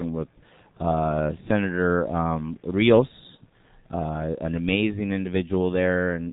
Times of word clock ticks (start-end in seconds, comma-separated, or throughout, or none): none